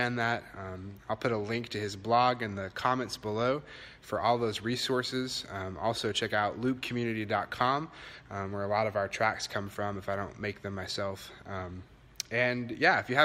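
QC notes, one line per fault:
No technical faults are audible in the signal.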